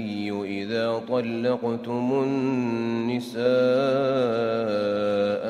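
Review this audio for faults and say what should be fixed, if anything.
Nothing stood out on listening, so there is nothing here that calls for fixing.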